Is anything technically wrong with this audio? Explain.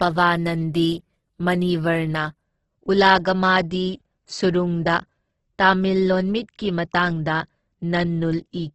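Yes. Throughout the speech, the likely cause is heavy Opus compression in its CELT music mode, consistent with roughly 12 kbps. Short of bits, the encoder fills bands with folded or noise content, so the speech sounds rough and grainy, with nothing above 12 kHz.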